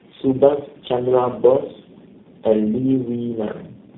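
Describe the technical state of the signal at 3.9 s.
Tandem speech coding runs through the whole clip, including at 3.9 s: the speech has passed through four low-rate speech codecs in a row, likely AMR-NB, GSM full rate, G.726 and finally G.729A, each decoding and re-encoding the previous one's degraded output. Nothing remains above 3.8 kHz, and the voice sounds muffled, rough and warbly.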